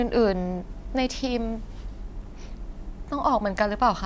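No technical faults can be heard anywhere in this speech.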